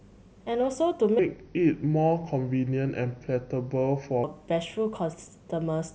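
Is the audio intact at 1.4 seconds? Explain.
No. At 1.4 seconds the speech sits inside a section at the wrong speed. It runs from 1.19 to 4.24 s. Over that span the audio plays at 0.779 times its recorded speed. Speed and pitch fall together. The voice drops by about four semitones and sounds deep and drawn out. The change is abrupt at both edges. The likely cause is a player or edit clocking that section too slowly.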